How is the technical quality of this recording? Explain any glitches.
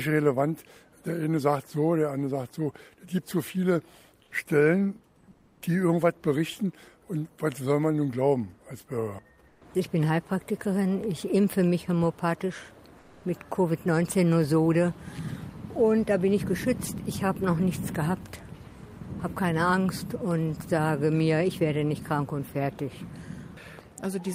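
The recording has four short spots of comfort noise in place of the background, at 4.23–4.31 s, 5.31–5.61 s, 9.47–9.61 s and 12.99–13.23 s. In each pause the real background gives way to a smooth, featureless hiss about 6, 10, 2 and 3 dB quieter. The likely cause is discontinuous transmission: the sender stops during quiet moments and the receiver synthesises stand-in noise. Unlike a dropout, the gap never goes silent.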